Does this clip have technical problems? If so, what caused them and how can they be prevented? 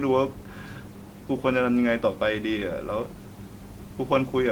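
No, there are no technical faults to prevent here.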